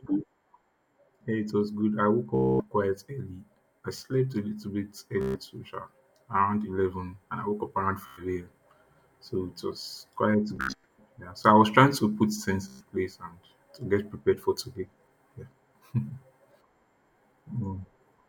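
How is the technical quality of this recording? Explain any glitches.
The speech has Bluetooth stutter at 2.35–2.63, 5.21–5.40, 8.06–8.23, 10.56–10.85 and 12.68–12.85 s. Lost or late packets made the receiver loop its last short buffer, producing a machine-gun buzz of 0.1 to 0.24 s (scattered near 10.6 s). Speech then resumes further along.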